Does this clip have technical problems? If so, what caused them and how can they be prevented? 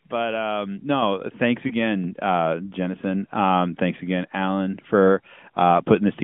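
Yes, there are two technical problems.

The first is a microphone volume step-up at 1.02 s, just after "but um". The level jumps by about 6 dB in one step. The voice and the background rise together, so the change comes from the input gain, not the talker. Automatic gain control in the call software judged the microphone too quiet and raised the device's input volume at once. To prevent it, disable automatic microphone adjustment and set the input level by hand before the call.

The second is a lost AMR speech frame, from 1.68 to 1.74 s. There is a brief dip or warble in the speech. This fits a single lost 20 ms frame. Radio errors corrupted that frame. The AMR decoder then filled the gap by repeating the last good pitch and vocal tract settings at lower gain. The speech comes back weak or rough for a moment. The narrowband line limits the sound to roughly 150 Hz to 3.5 kHz. To prevent it, make calls where mobile reception is stronger, or use a wired or Wi-Fi connection.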